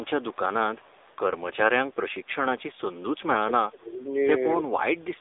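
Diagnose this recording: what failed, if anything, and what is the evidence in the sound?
Thin, boxed-in and plainly buzzy from start to finish, the speech has the synthetic edge of an old mobile call, with nothing audible above about 3.8 kHz and the low end gone below roughly 300 Hz. The failure sits at the codec stage: an AMR narrowband mobile codec (AMR-NB) rebuilt the speech from a vocal-tract model excited by sparse pulses in 20 ms frames. The plainly audible coarseness fits a low mode around 7.4 kbps.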